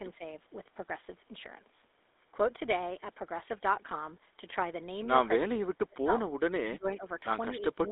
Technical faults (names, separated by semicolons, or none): GSM full-rate codec; speech suppressed in double talk